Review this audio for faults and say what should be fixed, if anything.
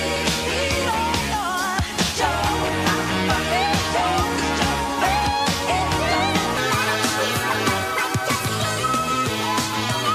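Section at the wrong speed, from 6.57 s to the end of the clip at 10.15 s. At 6.57 s the sound abruptly becomes hurried and higher, running about 1.37 times faster than the material before it, with pitch raised by roughly five semitones. Speed and pitch shift together, which points to a likely sample-rate or clock mismatch in the editor or player, so the samples in that stretch are being read out faster than they were captured. To prevent it, confirm every segment's sample rate matches the project or playback rate before joining or exporting.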